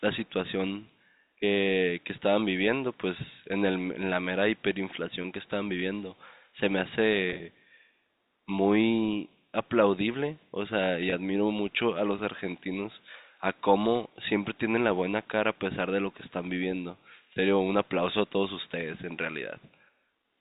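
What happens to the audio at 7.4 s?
Between 7.30 and 7.40 s there is packet loss with pitch repetition. About 70 ms of audio goes missing in short gaps scattered over 100 ms, the longest only 30 ms, which fits several small 10 ms packets. The receiver fills each gap by looping the last pitch period, so the sound turns briefly held and buzzy. On a spectrogram the harmonics freeze into flat, evenly spaced lines. The waveform shows identical repeating cycles where natural variation should be.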